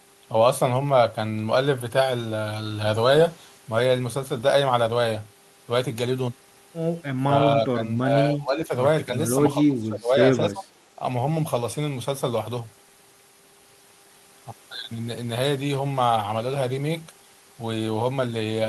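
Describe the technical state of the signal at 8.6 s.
At 8.6 s the speech sits inside a stretch of speech suppressed in double talk, running from 8.34 to 8.72 s. The level sinks by roughly 10 dB for under half a second and then recovers. The likely cause is an echo canceller that, with both ends talking at once, could not separate the near talker from loudspeaker echo and attenuated everything. Unlike a packet dropout, the sound is turned down rather than cut to silence.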